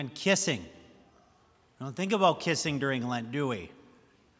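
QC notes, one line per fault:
No audible faults detected.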